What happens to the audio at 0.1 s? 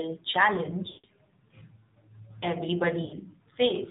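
At 0.1 s, as everywhere in the clip, the speech is passing through the AMR narrowband mobile codec, which models the vocal tract from a few pulses per 5 ms subframe. The plainly buzzy, synthetic tone fits the 7.4 kbps mode. A spectrogram shows a flat ceiling at 4 kHz with nothing above it.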